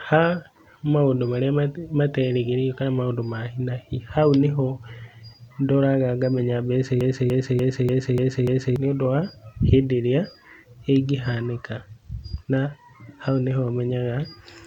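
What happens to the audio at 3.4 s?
Nothing goes wrong at 3.4 s: the speech runs on intact there, with no dropout, click or distortion.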